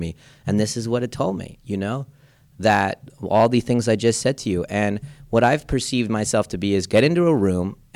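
A speech clip with hard clipping in four bursts: 2.66 to 2.85 s (driven about 6 dB past full scale), 3.35 to 4.26 s (about 4 dB), 5.36 to 5.53 s (about 3 dB) and 6.95 to 7.07 s (about 6 dB). The level overran what the signal path could carry, so the peaks were sheared off, producing a gritty crackle on those loud passages. The waveform shows flat-topped peaks, and the spectrogram shows broadband harmonic smearing reaching into the high kHz range.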